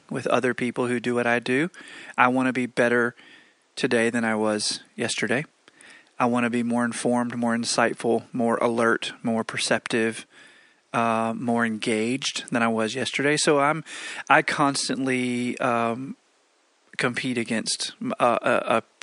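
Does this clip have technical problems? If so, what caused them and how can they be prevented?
No, no technical faults.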